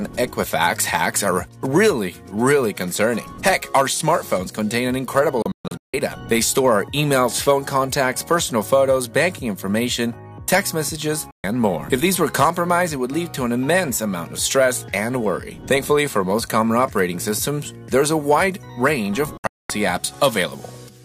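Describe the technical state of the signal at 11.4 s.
At 11.4 s you're inside a digital broadcast dropout running from 11.31 to 11.44 s. The receiver muted after bad or missing frames, so the sound fades out over about 3 ms and roughly 128 ms vanishes, which fits around four lost frames.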